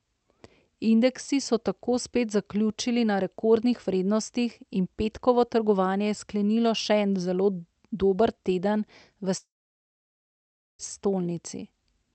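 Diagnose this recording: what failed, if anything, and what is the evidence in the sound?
Long network dropout, 9.37 to 10.81 s, at the network stage. The speech trails into a short fading buzz as the receiver stretches its last sound, then about 1.3 s of near silence, and resumes with about 1.4 s of audio simply gone, likely packets lost on the call's link.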